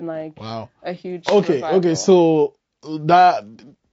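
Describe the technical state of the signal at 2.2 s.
At 2.2 s the speech runs through the same low-delay AAC compression damage present across the whole clip, most likely an AAC-ELD encoder working at a low rate, with grain consistent with roughly 32 kbps. At such a low rate its coarse quantization leaves noise in the gaps between pitch harmonics. The voice sounds plainly rough and grainy, and the top band comes across lowered or synthetic.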